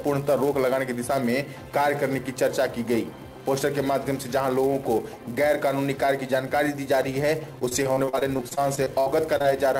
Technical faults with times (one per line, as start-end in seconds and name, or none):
0.00-9.79 filter restarted on every block
7.59-9.46 repeated packet loss (robotic sound)